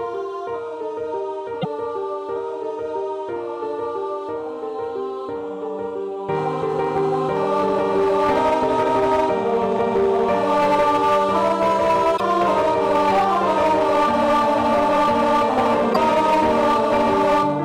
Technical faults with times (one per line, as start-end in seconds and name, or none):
0.00-17.65 hard clipping
1.61-1.65 broken MP3 bit reservoir
12.16-12.21 broken MP3 bit reservoir
15.92-15.97 broken MP3 bit reservoir